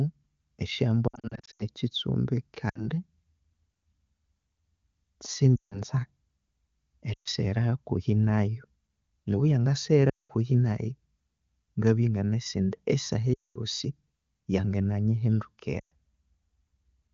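Lost AMR speech frames occur at 1.08–1.63 s, 2.70–2.85, 5.56–5.82, 7.13–7.28 (before "hakuhi nayu"), 10.09–10.31, 13.34–13.58 (after "indi esaha") and 15.80–15.91 s. Corrupted frames are replaced by repeating the last good parameters at falling gain, giving brief warbles and sound that drops to near silence within two frames.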